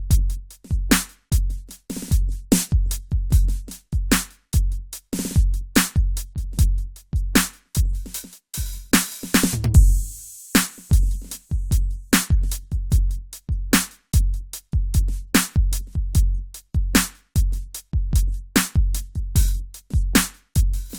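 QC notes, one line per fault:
No fault is heard anywhere in this music. There is nothing to log against it.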